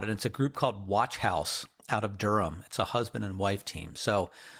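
There are no technical faults to describe in time order in this speech clip, which carries only light Opus voice compression.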